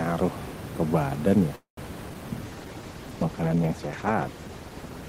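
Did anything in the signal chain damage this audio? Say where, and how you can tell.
Yes. Four kinds of damage come from the network, jitter buffer and codec stages.

Call audio freeze, 1.55 to 1.80 s. The sound stops moving forward, and the receiver stretches the last fragment into a fading buzz for about 0.22 s, roughly half of it (about 0.11 s) near silence. Afterwards the audio resumes where it left off, 219 ms later than before. On a spectrogram this shows as smeared horizontal bands thinning into a quiet gap. The likely cause is packets held up in transit until the jitter buffer ran dry.

Short concealed packet loss, at 2.09 to 2.13 s and again at 2.14 to 2.17 s. Each event loses about 40 ms of audio, but only 4 ms and 6 ms are concealed, so the sound skips ahead with a brief smear, and the playout delay shrinks by a few hundredths of a second each time. In the waveform these appear as abrupt splices with a short crossfaded patch. 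On a spectrogram they are two narrow vertical discontinuities about 0.04 s apart.

Jitter buffer slow-down, 2.29 to 2.83 s. The receiver rebuilt its reserve by repeating individual pitch periods and bits of pause, adding 68 ms over about half a second. Playback runs at 89% speed with the pitch unchanged, so sounds are drawn out. A waveform shows near-identical periods repeated in runs, and spectrogram harmonics stretch sideways without shifting in frequency.

Call bitrate drop, from 2.43 s to the end. The encoder was throttled from 32 kbps to 13 kbps and stayed at the lowest rate for about 2.15 s, after its bandwidth estimate fell. Coarser Opus coding makes the sound rough and watery, and the top of the band is trimmed, so it also turns muffled. On a spectrogram the upper frequencies go empty from 2.43 s onward, and the remaining content looks blocky and smeared.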